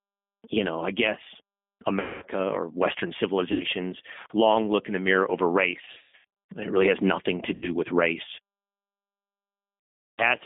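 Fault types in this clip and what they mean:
G.729 codec: low-bitrate 8 kbit/s speech coding band-limited to 200 Hz–3.5 kHz, audibly rough and synthetic; spectrogram shows nothing above 3.5 kHz throughout.
VoIP packet loss concealed by the speech codec: lost packets replaced by decaying extrapolated buzzy tone or coloured noise, heard near 2.0, 3.5, 5.9, 7.5 and 10.1 s; waveform shows fading smeared stretches.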